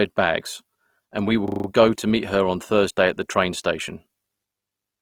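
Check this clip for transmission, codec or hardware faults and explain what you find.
Two faults are present: coding damage across the whole clip, and a short hang loop in the first two seconds.

Opus compression, throughout: the speech sounds grainy and rough, with noise-like fill where detail should be. Bandwidth stays full, reaching about 20.4 kHz. This texture is likely from Opus in its CELT music mode at a low rate, around 24 kbps. Starved bands are rebuilt by folding or noise rather than left empty.

System hang loop, 1.48 to 1.68 s, between "bags and we will" and "go and meet her": a 40 ms slice repeats five times, producing a rapid 25 Hz buzzy stutter. The driver stalled while the hardware kept replaying its ring buffer, which fits a 40 ms buffer. Essentially nothing is lost.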